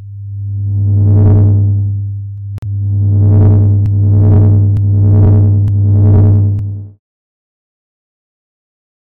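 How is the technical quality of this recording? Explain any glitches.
The recording has two short digital broadcast dropouts, from 2.58 to 2.64 s and from 7.02 to 7.20 s. In both, the receiver stopped getting valid frames, either because the signal was lost or because the frames failed their checksums, and it muted until good data returned. The audio drops abruptly to silence, and whatever was sent during those gaps is gone. The first hole is about 43 ms long, which suggests a single lost frame. The second is 128 ms, which fits about three consecutive frames. It comes just after the smooth fade-out that runs from about 6.5 s to 7.0 s. On a waveform, each dropout appears as a flat line. On a spectrogram, it shows as a clean vertical blank band across all frequencies.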